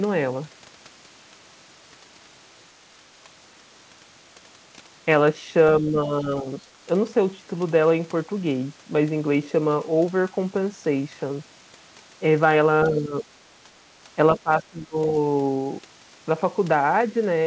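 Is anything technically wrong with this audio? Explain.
Yes. The speech dips three times, at 5.81–6.61 s, 12.88–13.24 s and 14.37–14.96 s, by about 5 dB, 10 dB and a deep 25 dB, all likely speech suppressed in double talk, where the echo canceller mistakes overlapping talk for echo and turns it down. The band stops at 8 kHz, which fits a G.722 call path.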